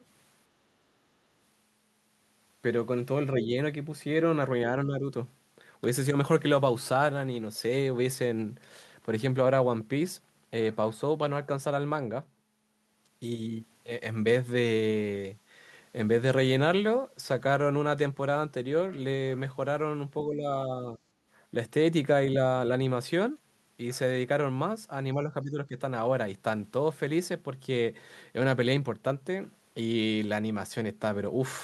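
At 4.85–5.04 s, 20.26–20.45 s, 20.92–21.0 s and 25.15–25.77 s the speech ducks, from a slight sag to about 15 dB down. This is speech suppressed in double talk, likely an echo canceller turning the talker down while the far side spoke. Unlike packet-loss dropouts, the level sinks and recovers rather than snapping to silence.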